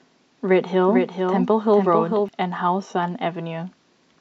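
From 0.87 s to 2.29 s the speech has a doubled audio track. A second full-band copy trails the original by roughly 0.4 s, around 5 dB quieter. It has no decay or room colour, and it cuts in and out abruptly. A slower second capture path is the likely cause.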